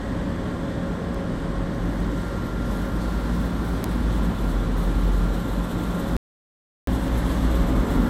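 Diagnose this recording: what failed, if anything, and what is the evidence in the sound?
A digital transfer or storage stage suffered bit error spikes: a single flipped bit corrupted one sample at 1.15 s and another at 3.84 s. Each sample jumps by a power of two and snaps back, producing an isolated, broadband tick unrelated to the surrounding audio.

An audio dropout to silence runs from 6.17 s to 6.87 s, about 0.71 s. The input path likely lost its source through a disconnect or failed link while writing continued as silence. The audio cuts off abruptly into silence, without room tone, then resumes mid-flow.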